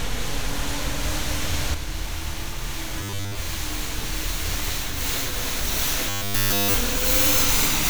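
At 1.75 s one channel drops out and stays gone to the end. The shared content sinks abruptly by about 6 dB in the mono sum, and anything that lived only in that side vanishes. That's likely one stereo channel being lost somewhere upstream.

Robotic sound from repeated short buffers shows up at 2.99–3.37 s, where most of the stretch is affected, and again at 6.09–6.74 s, where all of it is. The sound turns into a stiff metallic buzz at 100 Hz. The likely cause is a 10 ms chunk being looped while real audio arrives too late.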